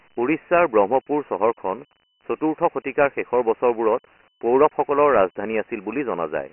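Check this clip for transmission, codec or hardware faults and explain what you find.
One codec fault runs through the whole of this speech clip: Dialogic VOX ADPCM. From start to finish the audio carries heavy gritty hiss that rides on the speech, and the band stops dead at 3 kHz, with little below about 250 Hz. The coder stores each sample as a 4-bit step relative to its prediction, so quantisation error tracks the signal as grainy noise. The hard 3 kHz ceiling and a rate of about 24 kbps point to 6,000 samples a second rather than 8,000. That ceiling separates it from a plain telephone-line band limit, which sounds clean and reaches about 3.4 kHz, and from 8 kHz ADPCM, which extends close to 4 kHz.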